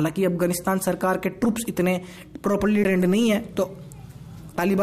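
A tick and a brief dropout of about 10 ms at 2.84 s, after which the audio jumps to a different point: a CD skip, with the laser landing on another turn of the spiral.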